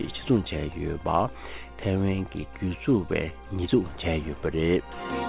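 There are no technical faults to describe; the audio comes through a G.711 call path with nothing above 4 kHz.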